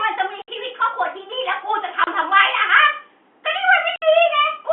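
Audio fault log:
0.42–0.48 s, 2.04–2.07 s, 3.96–4.02 s: packet loss filled with silence. The speech drops out in holes of 60, 30 and 60 ms. Each length is a multiple of 30 ms, which fits 30 ms packets. The gaps cut off sharply and restart abruptly. The waveform goes flat at zero with sudden steps on either side. On the spectrogram each gap is a blank vertical column, across the narrow telephone band, with a thin broadband streak at each edge.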